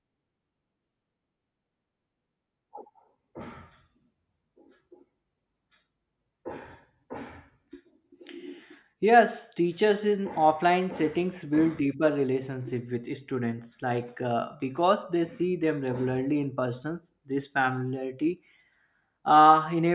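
No technical faults can be heard anywhere in the recording; the speech signal stays intact and continuous throughout.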